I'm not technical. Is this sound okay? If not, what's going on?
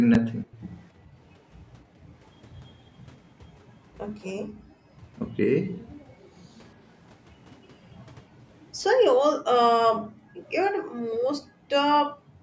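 No, there are a few problems, all tied to how the call handled its loudspeaker.

Around 0.11 to 0.19 s there's an echo leak: a faint, delayed copy of the voice, arriving about a quarter-second late. The likely cause is an echo canceller that didn't fully scrub what its microphone picked up from the speaker.

From 0.43 to 0.59 s you get speech suppressed in double talk. The voice briefly dips, likely because both sides spoke at once and the canceller turned everything down, the real talker included.

Then there's background gated by the echo canceller. The room sound drops away at 0.91 to 1.17 s, 1.83 to 2.03 s and 4.40 to 4.92 s, and again from 9.17 s to the end, while the canceller clamps the microphone during loudspeaker playback.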